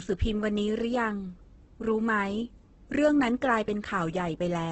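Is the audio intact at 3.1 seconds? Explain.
No. At 3.1 seconds the speech carries the same damage heard across the whole clip. Nothing reaches above about 8.3 kHz, so the top end is dull. Tones sound rough, grainy and noisy rather than swirling. The likely cause is heavy Opus compression in its music (CELT) mode. Short of bits, the encoder keeps each band's energy but fills the detail by copying lower bands or adding noise. That fits a bitrate around 12 kbps.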